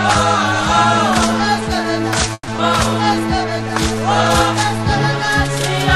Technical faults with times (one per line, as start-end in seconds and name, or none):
2.33-2.49 call audio freeze
2.57-2.60 skip ahead
3.27-4.00 jitter buffer slow-down